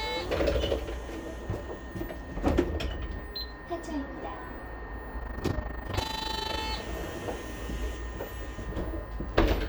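From 5.2 s to 6.61 s the sound takes on a fast, rough flutter, a tremolo pulsing around 30 times a second, with the level swinging by about 11 dB on each cycle. This is overlap-add ripple: the audio was split into windowed frames and rebuilt with an overlap whose windows do not add up to a steady gain, so the loudness dips and swells once per frame.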